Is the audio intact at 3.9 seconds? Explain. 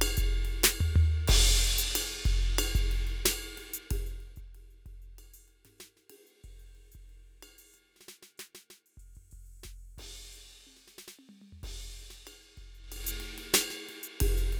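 No. From 3.76 to 4.52 s the music carries a fast ticking, zipping texture as its level drops by roughly 25 dB. This is zipper noise: the fade moves in unsmoothed 1 dB jumps, about 30 a second, and each jump clicks.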